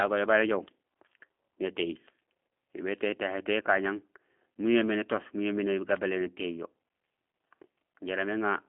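G.729 codec damage runs through the whole speech clip. The speech has been rebuilt from a vocal tract filter, a pitch predictor and a few pulses per 10 ms frame, which fits an 8 kbit/s G.729A stream. The result sounds plainly rough and synthetic. The line band spans 200 Hz to 3.4 kHz and nothing above 3.6 kHz survives, so the high energy of sibilants and the upper spectrum are missing.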